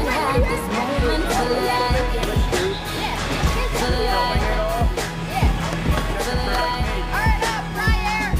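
No technical faults are audible anywhere in the recording.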